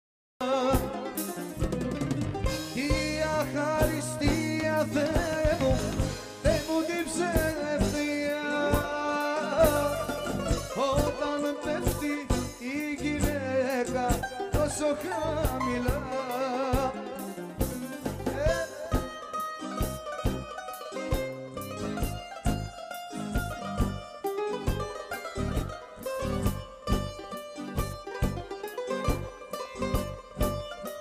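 The capture began late, so the opening of the audio was lost: a cut-off start. Nothing is heard from 0 to 0.41 s, and then at 0.41 s the sound appears abruptly, already partway through rather than building up from its beginning. There is no natural attack or fade-in, so the first moment of sound lands as a sudden step out of silence, with whatever came before the cut simply missing.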